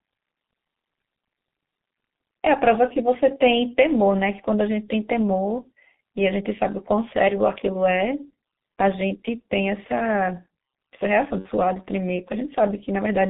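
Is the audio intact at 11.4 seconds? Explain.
No. From 11.39 to 11.49 s the speech breaks into a short buzzy tone or coloured noise that fades rather than continuing naturally, and the signal stays weak and smeared for a moment afterwards. This is VoIP packet loss concealed by the speech codec. About 60 ms of data went missing, which fits two lost 30 ms frames. The decoder filled the gap by repeating its last pitch and spectral shape at falling gain, and because each frame builds on the previous one, recovery lags once data returns.

Underneath that, the whole passage is muffled and hoarse, with blurred consonants and nothing above about 3.7 kHz or below 150 Hz. That is the G.723.1 codec, heavily degrading the speech. The narrow band and the coarse, slowly updated voice model fit a low-rate telephony codec running at around 6.3 kbit/s.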